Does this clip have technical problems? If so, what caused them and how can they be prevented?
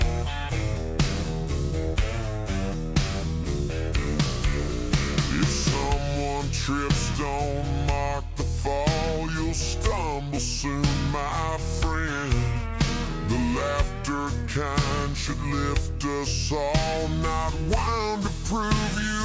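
Yes. Throughout the clip, samples are played back more slowly than they were captured, with no conversion, a wrong sample rate that fits 22 kHz material being played at 16 kHz. Everything runs at 0.726 times normal speed and drops about 5.55 semitones in pitch, sounding low and dragged. Resample to the playback rate, or set the output device to the recording's rate.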